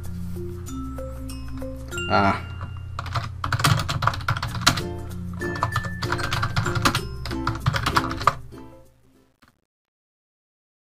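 From about 8.18 s the closing fade-out turns gritty, and between 8.66 and 10.86 s its quiet tail is at its worst. This is truncation distortion on a fade: the gain stage keeps too few bits (it sounds like roughly 11) without dither, so the low-level waveform collapses into coarse steps.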